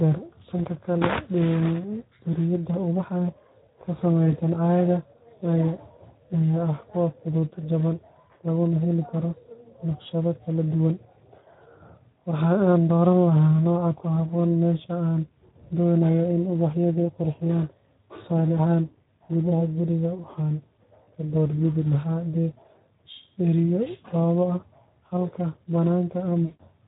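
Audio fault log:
Throughout: Speex codec. The speech is coded by Speex at a setting that points to roughly 11 kbps, and the damage is plainly audible. With that few bits left for the excitation, the voice comes out noisy and hoarse.
21.04–21.08 s and 26.45–26.65 s: VoIP packet loss concealed by the speech codec. About 40 ms is lost in the first gap and 140 ms in the second. The decoder keeps stretching its last pitch and filter at falling gain, so each gap becomes a stretched, fading sound.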